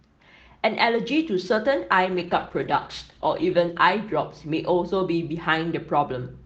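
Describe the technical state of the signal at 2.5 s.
A call bitrate drop runs from 2.12 to 3.87 s. The encoder, starved of bits, codes the speech more coarsely, which fits a fall to around 13 kbps, so it sounds rough and watery.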